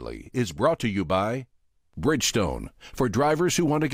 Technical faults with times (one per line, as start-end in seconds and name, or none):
none